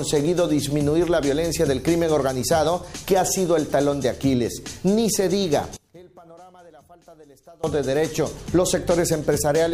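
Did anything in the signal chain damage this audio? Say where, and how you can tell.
Yes. Between 5.77 and 7.64 s the sound collapses by about 27 dB, background and all, then returns at full level. The likely cause is one channel inverted: one leg of a stereo pair had its polarity reversed, from a miswired cable or a processing stage, before the fold to mono. Material common to both channels cancelled in the sum, leaving only their small difference audible for those 1.87 seconds.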